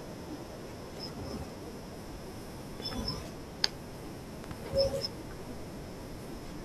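A sharp loud pop cuts in at 2.80 to 2.82 s, standing well above the speech, then a stronger double pop hits at 4.44 to 4.53 s. Both are likely voltage spikes from a plug, switch or static.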